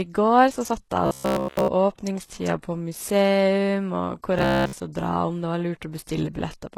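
From the start, the treble sounds gritty and metallic. This is likely HE-AAC compression, which fits a very low bitrate of around 16 kbps. The upper band is rebuilt from copied lower bands rather than coded. The damage is plainly audible throughout.

From 1.07 to 1.68 s, the speech turns into a rigid, metallic buzz. It sits at 66.8 Hz, which points to a buffer of about 15 ms being replayed over and over. This is likely robotic sound from repeated short buffers. The repeats cover the whole stretch. The real audio is skipped. The same buzz returns from 4.39 to 4.75 s and covers most of that span.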